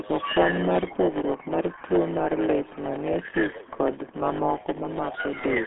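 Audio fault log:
Throughout: block size mismatch (padded). Each block arrives a bit short and gets topped up with silence, so a 100 Hz buzz rides under the speech. The gaps also stretch it out to about 0.92 of normal speed, yet the timbre stays put.
Throughout: RealAudio 14.4 codec. The speech sounds muffled and gargly, squeezed into a phone-line band of roughly 200 Hz to 3.4 kHz with nothing above 3.8 kHz. That's what an 8 kbit/s dial-up-era speech codec does when it's working hard.
4.53 to 5.66 s: low bit depth with dither. Right at the end an even, steady hiss comes in, sitting about 25 dB below the speech. The signal is down to 7 bits, and dither has turned the rounding error into plain noise rather than grit.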